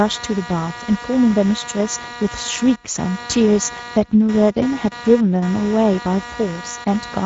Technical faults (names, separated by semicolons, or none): computer activity noise; Speex codec